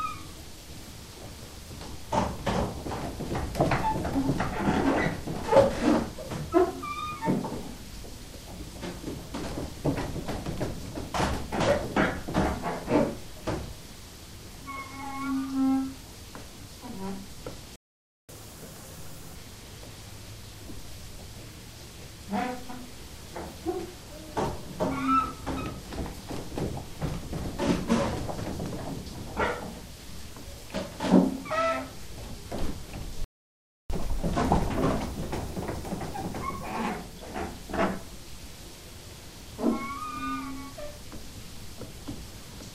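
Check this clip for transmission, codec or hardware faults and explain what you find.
Two playback stalls occur, each followed by catch-up at higher speed.

Playback stalls at 17.76–18.29 s (0.53 s) and 33.24–33.90 s (0.66 s): the sound cuts out mid-flow, likely because the player's data ran dry or its thread blocked. The waveform shows flat silent gaps, and the spectrogram shows blank vertical bands.

Catch-up at higher speed from 18.29 to 19.35 s at 1.5× (roughly seven semitones up) and from 33.90 to 36.90 s at 1.15× (about two semitones up): the player resamples its backlog to regain lost time, so everything briefly sounds faster and higher. On a spectrogram, the harmonics shift upward in those stretches, then drop back.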